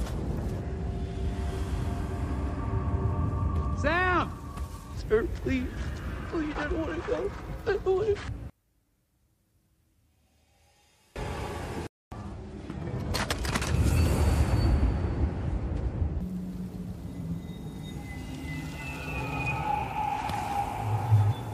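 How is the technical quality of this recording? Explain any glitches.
One glitch stands out. From 8.50 to 11.16 s the sound drops by about 33 dB, leaving only a faint residue. The likely cause is one channel inverted. With one side's polarity reversed, everything common to both channels cancels when they are summed to mono. Unlike a dropout, it does not fall to silence, because the small difference between the channels survives.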